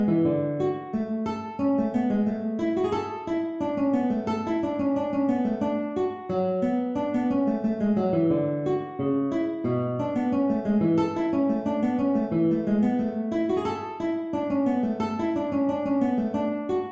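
Nothing technical stands out here, and the audio just runs along without anything going wrong at any point.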